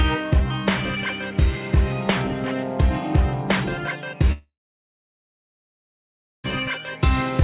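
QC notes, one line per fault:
4.32–6.46 s, long network dropout: about 2.1 s of audio is simply gone. Right at 4.32 s the last sound gets smeared on as a fading buzz, which is the receiver trying to cover the gap. That dies out within a couple of tenths of a second, leaving near-silence for almost 2 s before the sound picks up again later on with the lost chunk missing. The likely cause is packets not arriving over the network. The band stops at 4 kHz, which fits a narrowband G.711-style call path.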